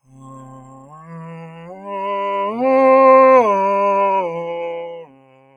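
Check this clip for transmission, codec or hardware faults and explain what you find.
The music pumps and thins throughout, a sign that a noise suppressor built for speech was left on with music. Held tones and decays sink while attacks come through, so the level swings by around 15 dB as the processing treats sustained sound as noise.

The sound is cut by the noise suppressor from 0.03 to 1.86 s, dropping by up to about 16 dB, and again from 4.92 s to the end, by up to about 17 dB. Sustained material sinks and tails shorten because the suppressor mistook them for background noise.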